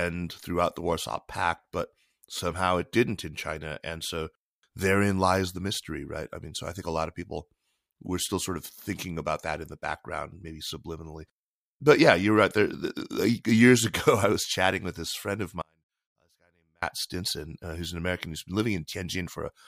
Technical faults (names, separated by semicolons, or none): audio dropout to a faint residue